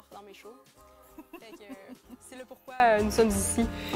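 From the start to 2.8 s, summed to mono, the sound drops by about 25 dB. Centred material all but disappears, leaving a faint residue of whatever differed between left and right. The likely cause is one channel inverted: with one side's polarity reversed, everything common to both channels cancels in the sum, and only their difference survives.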